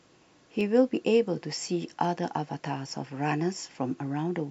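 The stream of this speech clip likely lost a tiny run of samples, well under a millisecond each time, so the waveform jumps abruptly. These dropped samples remove no audible sound but leave a single sharp click at 0.61, 2.05 and 2.89 s.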